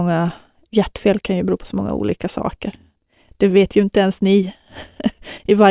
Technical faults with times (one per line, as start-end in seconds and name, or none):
none